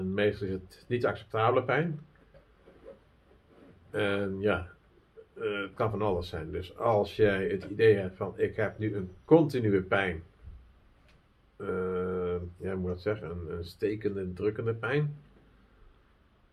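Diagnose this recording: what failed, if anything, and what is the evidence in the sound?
Nothing failed: no fault is audible at any stage from capture to playback.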